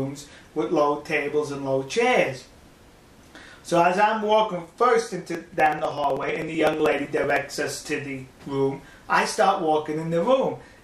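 From 5.28 s to 7.43 s the audio carries periodic USB or driver dropouts. A regular tick runs through that stretch, repeating every 63 ms, about 16 times a second. Each tick is a tiny gap where around a millisecond of audio is skipped outright, not replaced with silence. There are around forty of them. Something on the system is stalling the USB bus or audio driver on a fixed cycle, so the stream briefly loses data each time.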